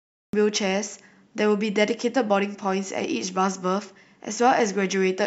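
Capture began late, a cut-off start: the first 0.33 s is digital silence, then the speech jumps in mid-sound at 0.33 s with no natural attack.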